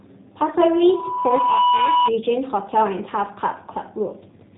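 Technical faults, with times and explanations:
Throughout, G.729 codec: the speech runs through a G.729 low-bitrate coder, which fits 8 kbit/s. Instead of sending the waveform it rebuilds each short frame from a vocal tract filter, a pitch predictor and a few pulses, and that's where the slightly rough, synthetic edge comes from. The damage is plainly audible. Nothing above about 3.8 kHz makes it through, so the sibilants and the top end sound dull and boxy.
0.56 to 2.1 s, loudspeaker feedback squeal: a tone at 984 Hz creeps in and swells over roughly a second into a squeal, ending up around 5 dB above the speech. What's happening is that the mic is hearing the loudspeaker it feeds. Around 984 Hz the loop gain tops one, so that single frequency keeps feeding itself and grows until it ends at about 2.1 s.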